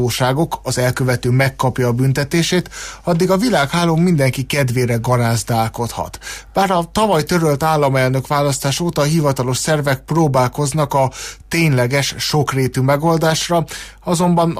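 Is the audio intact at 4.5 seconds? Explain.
Yes, the audio is intact at 4.5 seconds, with no fault at that moment.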